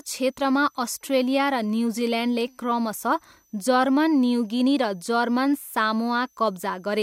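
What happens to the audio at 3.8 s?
At 3.8 s the speech carries a switching supply whistle, though it isn't confined to that moment; it runs through the whole clip. A switching power supply is either cycling in an audible burst mode or beating with another supply, leaking a thin, high whistle that wanders between about 6.0 and 6.2 kHz, roughly 40 dB below the speech. On a spectrogram it shows as a faint, slightly wavering horizontal line near 6 kHz. The waveform looks essentially unchanged.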